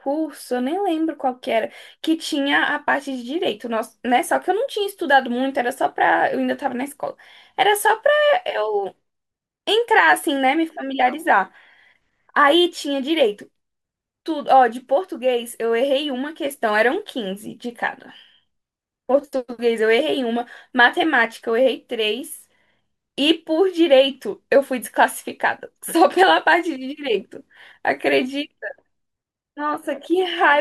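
No technical faults can be heard anywhere in the speech; the signal stays steady and intact throughout.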